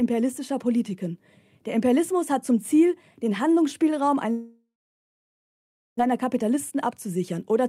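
From 4.31 to 6.01 s, a long network dropout is the likely cause: incoming audio stopped, and the receiver stretched the last sound into a fading buzz or hiss before leaving about 1.3 s of silence. When sound resumes, roughly a second of material is simply missing.

From 6.11 to 7.65 s, a jitter buffer speed-up follows. The buffer had built up excess delay, so the receiver trimmed short pitch-period slices repeatedly, shedding around 150 ms. The audio plays at 108% speed with unchanged pitch and sounds noticeably hurried.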